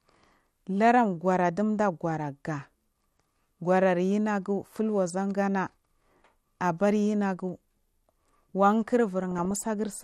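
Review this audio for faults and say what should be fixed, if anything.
MP2 compression, throughout: the speech sounds dull, with a gurgling, granular texture. This is likely from MPEG Layer II coding at a starved rate, which fits something near 80 kbps: upper sub-bands switch in and out, and the bands that remain are coarsely quantised.

DAB burbling, 9.23 to 9.58 s: a burst of burbling sits over the speech. Bit errors got past error correction into the audio data, and the corrupted samples put short blips of noise into single sub-bands. The error rate sounds like a fraction of a percent.

To prevent both, record from a stronger DAB signal or take the audio from a higher-bitrate or lossless source, so the sub-bands aren't starved of bits and errors never reach the decoder.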